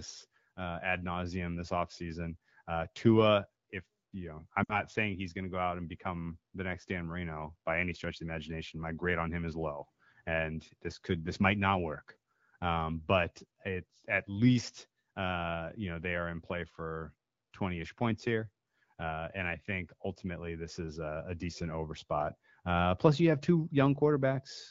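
Lost AMR speech frames at 4.64 to 4.80 s: the decoder bridged a 60 ms gap, fitting three frames, by reusing earlier settings with falling gain, sinking to near silence.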